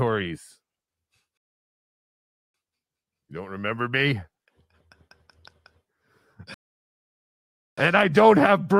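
At 1.37 s the speech drops into dead silence and stays there until 2.54 s, then picks up at exactly the point it left off. That's a rebuffering stall: the player ran dry of downloaded audio and simply waited for more. The same thing happens again from 6.54 s to 7.78 s. Nothing gets skipped either time, but each pause stretches the clip, by about 1.17 s and then 1.23 s.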